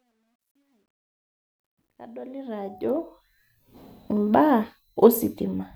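From 0.0 to 3.46 s, the speech fading in shows truncation distortion on a fade, consistent with about 12-bit truncation without dither. It is grittiest until 1.79 s. Unlike steady hiss, the grain tracks the rising level.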